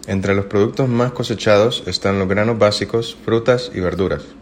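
No technical faults can be heard anywhere in this recording.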